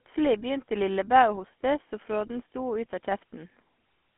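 Throughout, the speech has passed through a GSM full-rate codec, which fits a 13 kbps stream. It rebuilds the voice from a vocal-tract model and sparse pulses, so the whole clip is plainly buzzy and gravelly, confined to a 200 Hz to 3.4 kHz line band with nothing above 3.8 kHz.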